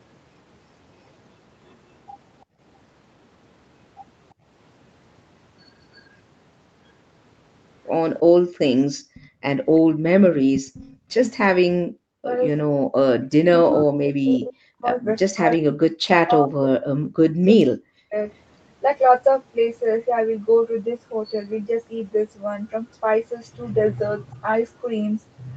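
A speech recording with three echo-canceller faults. Background gated by the echo canceller pulls the room sound down by about 21 to 40 dB at 2.45–2.6 s, 4.34–4.45 s, 8.32–11.09 s and 12.62–12.86 s. An echo leak brings back a copy of the voice 345 ms late, around 10 to 35 dB below the speech. It occurs at 9.14–10.97 s, 13.68–14.45 s and 15.51–15.56 s, likely because the far side's canceller did not fully remove its loudspeaker sound. From 11.5 to 18.15 s the voice dips by up to roughly 40 dB, for around four seconds in total. This is speech suppressed in double talk, likely because both sides spoke at once. The Opus call path's top end stops at 8 kHz.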